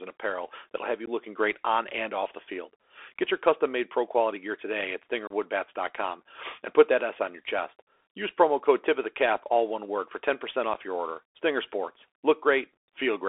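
Throughout, the audio runs through a Bluetooth CVSD headset codec. Its coarse one-bit delta coding, which fits a 64 kbps link, confines speech to 300 Hz to 3.4 kHz, scratches the sibilants and leaves granular hiss underneath. Unconcealed Bluetooth headset packet loss then drops a couple of packets at 1.06 s, a 15 ms hole between "apparel that'll have you" and "looking great on and". Next, a few packets go missing from 5.27 to 5.32 s after "quality gear today at", leaving a 30 ms silence. Finally, about one packet is lost at 10.74 s just before "your order", a 7.5 ms gap. Each hole starts and ends abruptly, and the sound returns briefly quieter.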